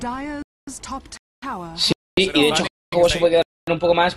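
Hard-edged holes of silence cut into the sound at 0.42–0.67, 1.17–1.42, 1.92–2.17, 2.67–2.92 and 3.42–3.67 s, each 250 ms long and recurring every 0.75 s. This is a gap between chunks: the audio arrives in 0.5 s blocks, and silence is inserted at each join rather than the next block following on directly. Nothing is removed, but the sound keeps stopping and restarting abruptly at every boundary.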